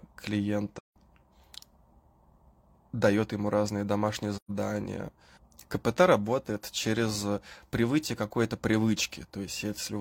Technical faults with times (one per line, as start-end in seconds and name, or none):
0.78-0.96 AAC frame loss with muting
4.36-4.51 AAC frame loss with muting